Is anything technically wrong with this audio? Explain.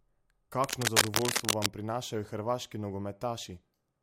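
Yes. From 0.64 to 1.67 s, just before "prinašajo hrvaški", a dense, ragged scratching and rustling sits over the speech, somewhat louder than the speech itself. This is cable scratch noise, most likely from a worn cable, connector or control being moved. As the loose contact shifts, its resistance jumps about rapidly, and those fluctuations enter the signal as irregular bursts of crackle for as long as the part is disturbed.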